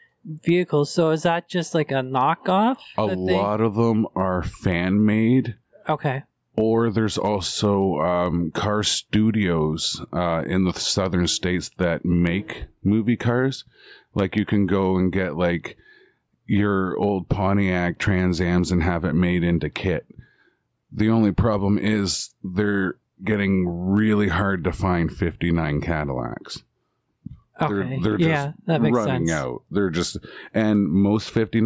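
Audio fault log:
throughout, gain pumping: the gain swings around 10 dB, squashing loud and soft speech closer in level, likely excessive microphone gain driving a fast limiter.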